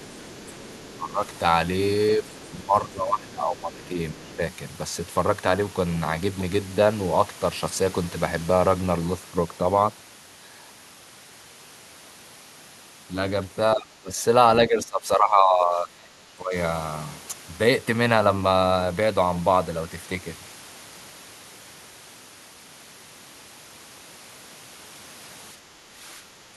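A faint second voice, about 25 dB below the speech, runs from 0.0 to 1.38 s, again at 2.3 to 2.51 s and 3.83 to 4.36 s: other side's voice leaking through, likely loudspeaker echo the canceller missed. The talker's speech dips by about 10 dB at 0.88 to 1.21 s, about 15 dB across 2.18 to 4.4 s, about 20 dB across 13.75 to 16.55 s, and about 10 dB from 25.54 s to the end. This is speech suppressed in double talk, likely the canceller turning both sides down.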